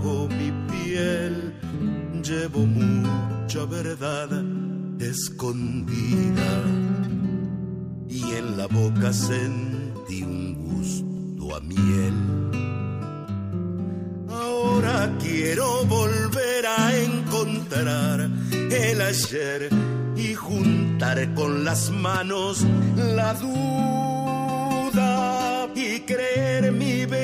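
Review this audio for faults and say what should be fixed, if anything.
From 15.45 to 19.24 s, pre-emphasis is left on: a 50 µs FM treble boost, about 11 dB at 10 kHz, was never de-emphasised, so the sound turns thin and sibilant. Prevention: pair every pre-emphasis stage with matching de-emphasis.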